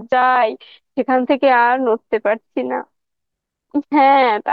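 Listening through the speech, nothing stood out as a technical fault at any point.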